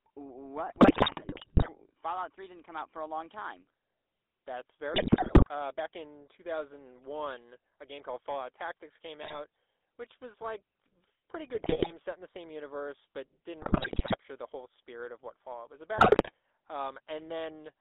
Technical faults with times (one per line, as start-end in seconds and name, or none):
0.00-17.81 GSM full-rate codec
0.68-1.79 GSM bit errors
4.94-5.49 GSM bit errors
9.22-9.40 GSM bit errors
11.54-11.92 GSM bit errors
13.62-14.17 GSM bit errors
15.98-16.32 GSM bit errors